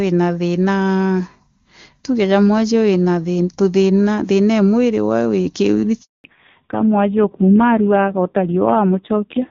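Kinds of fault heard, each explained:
Handover gap: the call switched networks and no speech frames got through for about 220 ms, from 6.02 to 6.24 s. The speech fades out within a few tens of milliseconds, then stays silent until the new link picks up, and whatever was said there is gone.
Fallback to narrowband: after the handover the call left HD Voice at 23.85 kbit/s for a narrowband codec, at a low rate that fits 5.9 kbit/s. From 6.24 s to the end nothing sits above 4 kHz, so the speech turns duller, thinner and rougher.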